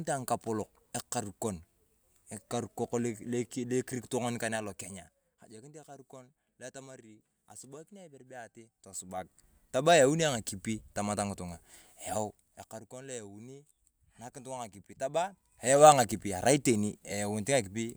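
Zipper noise runs from 8.80 to 9.44 s, as the level of the speech shifts by around 15 dB in about 2 dB jumps instead of a continuous ramp. With no smoothing between steps, each abrupt gain change puts a small click into the waveform, and at roughly ten steps a second these clicks form an audible ticking, zipping texture riding on the speech for the duration of the move.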